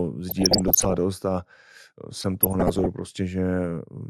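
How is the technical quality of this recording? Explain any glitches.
The recording has two spells of DAB burbling, at 0.29–0.97 s and 2.14–2.86 s. Residual bit errors, roughly under one percent, corrupt MP2 sub-band samples and scale factors, so the speech is broken by short noise blips and brief level jumps in single sub-bands. A spectrogram shows isolated frame-length blocks flaring in single frequency bands.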